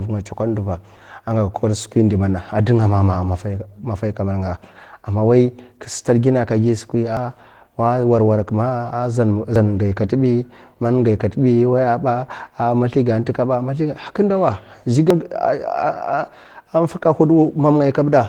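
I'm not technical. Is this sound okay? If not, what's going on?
No. Two separate problems can be heard.

The first runs through the whole recording: Opus voice compression, squeezed hard to make the file small. The speech has a slightly hoarse, buzzy, faintly robotic edge because the encoder rebuilds the voice from a rough model rather than keeping every detail. Unlike a simply muffled or dull recording, the sound isn't just darker. The high end is still there, but it's coarse and grainy.

The second happens three times, at about 7.17 s, 9.56 s and 15.10 s. Each time the speech suddenly jumps forward, as if a sliver had been snipped out, about a tenth of a second for the first two and a little more at 15.10 s. The likely cause is a dropped buffer (overrun): the computer didn't collect the incoming sound in time, so that piece was overwritten. What sets it apart from a dropout is that there's no silent gap. 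The two sides are joined directly.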